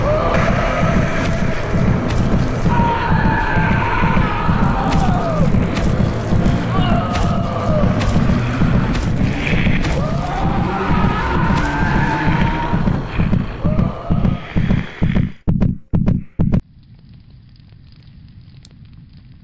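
From 4.64 to 7.2 s there's a steady 50 Hz buzz riding on the sound: a resampler restarted on every block. Each 20 ms block got converted in isolation, likely from 24 kHz down to 16 kHz, so every block edge carries a small error.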